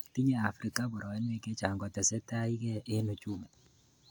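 No technical faults detected.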